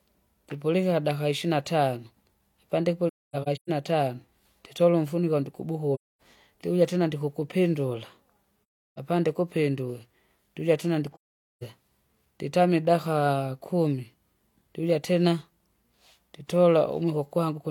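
AAC frame loss with muting breaks up this speech clip at 3.08 to 3.70 s, 5.94 to 6.21 s, 8.90 to 8.98 s and 11.12 to 11.63 s. At each point the decoder zeroed the spectrum of missing frames, so the sound fades out and back in over the overlapping windows instead of cutting sharply. The result is a soft-edged gap. The first dropout is scattered, with its longest silent stretch around a third of a second.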